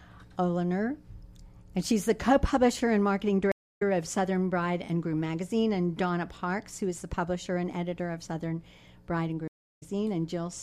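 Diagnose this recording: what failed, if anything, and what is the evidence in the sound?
The network connection dropped twice, and each time the player reconnected and restarted its decoder mid-stream. Each stream reconnect leaves a silent gap: 0.29 s at 3.52 s and 0.34 s at 9.48 s. The audio then resumes roughly 0.2 s and 0.3 s further on, skipping material.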